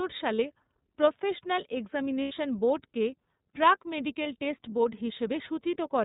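The whole clip carries the sound of the iLBC codec. Nothing above 4 kHz survives, so the speech sounds narrow. The damage is plainly audible, a rough, slightly synthetic texture. That fits the 13.33 kbps mode, which codes each 30 ms frame independently.

There are lost iLBC frames at three points. At 0.36 to 0.40 s, a 30 ms gap fits one lost frame. At 2.22 to 2.32 s, just before "বোর্ডকে প্রাক", a 90 ms gap points to three. At 4.22 to 4.27 s, between "বোর্ডকে প্রাক" and "টেস্ট বোর্ড", another 30 ms goes. Each time the decoder repeats the last pitch cycle with noise. This gives a brief held, buzzy vowel. Recovery is immediate.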